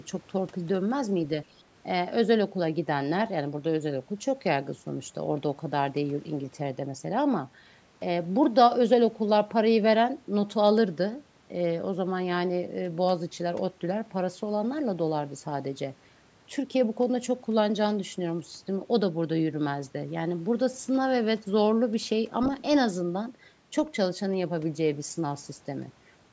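The speech shows no technical faults, and it carries the expected marks of a call's microphone processing, with the lowest bass taken out and nothing present above 8 kHz.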